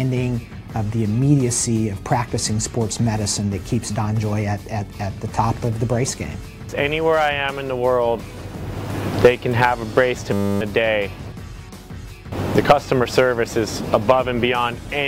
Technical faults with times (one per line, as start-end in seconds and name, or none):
10.33-10.61 system hang loop